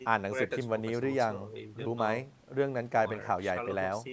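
No faults heard in the speech; the call microphone processing rolls off the lowest bass and leaves nothing above 8 kHz, as that path normally does.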